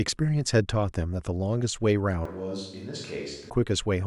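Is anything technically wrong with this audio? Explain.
Yes. From 2.25 to 3.5 s the speech turns suddenly roomy and hollow, about 5 dB quieter with thinner bass. This is likely a switch to a distant microphone, which picks up more room than voice. The waveform shrinks and its gaps fill with noise, while the spectrogram loses low end and smears.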